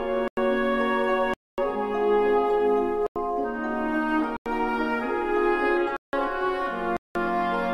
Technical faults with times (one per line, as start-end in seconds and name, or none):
0.28-0.37 block of digital silence
1.34-1.58 block of digital silence
3.06-3.16 block of digital silence
4.37-4.46 block of digital silence
5.97-6.13 block of digital silence
6.97-7.15 block of digital silence